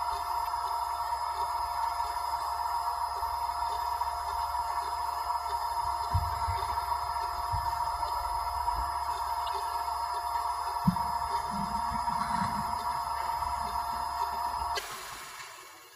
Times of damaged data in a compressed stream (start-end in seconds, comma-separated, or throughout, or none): 0.43-0.48, 2.37-2.41, 9.45-9.49, 12.63-12.67, 14.75-14.79